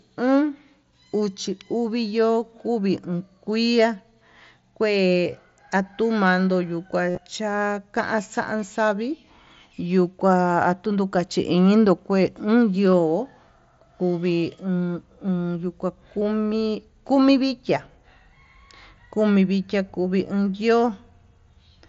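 Concealed Bluetooth headset packet loss hits at 7.10–7.18 s, where runs up to 52.5 ms are refilled from recent waveform, giving a buzzy held tone, and briefly at 12.92 s, nearly hidden.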